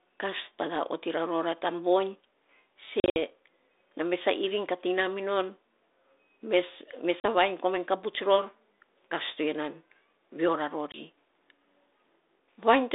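At 3.0 to 3.17 s there's packet loss on an ADPCM call: about 120 ms of dropouts scattered over 160 ms, with the longest hole about 60 ms. Shorter hard-edged gaps follow at 7.2 to 7.25 s and 10.92 to 10.98 s. After each gap the decoder's predictor and step size have drifted from the sender's, so the speech returns slightly distorted before it settles. Light ADPCM grit within the narrow 300 Hz to 3.7 kHz band suggests a 32 kbit/s G.726 link.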